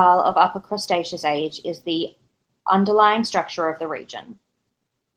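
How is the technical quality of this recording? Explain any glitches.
Nothing in this speech recording stood out as a technical problem on listening.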